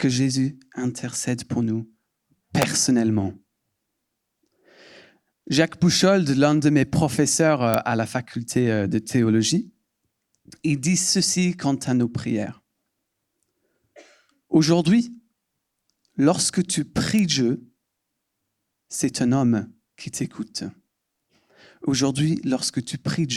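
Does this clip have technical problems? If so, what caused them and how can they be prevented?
Yes. Three sharp snaps sit on top of the sound, at 2.62 s, 7.74 s and 17.19 s. Each is an electrical switching spike. The first two are the strongest. The third is quieter, roughly 10 dB down. They are likely caused by a nearby switch, motor or static discharge arcing briefly, with the audio line picking up the burst. To prevent this, keep cables away from switching gear and use balanced, shielded lines.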